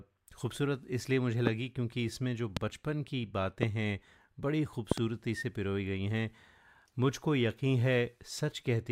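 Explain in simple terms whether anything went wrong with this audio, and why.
You'll hear a few loud pops sitting on top of the speech. There are sharp single pops at 1.47–1.49, 2.57–2.59 and 3.63–3.65 seconds, then a quick double pop from 4.92 to 5.00 seconds. Each one jumps out well above the talking, which keeps going underneath. The likely cause is a brief electrical jolt, from something like a cable being plugged in, a switch, static or a glitchy driver, that kicks the signal for a split second.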